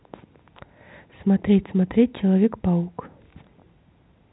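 No technical faults can be heard in this speech; its narrow telephone-band character, with nothing above about 3.9 kHz, comes from ordinary G.711 telephone coding working as designed.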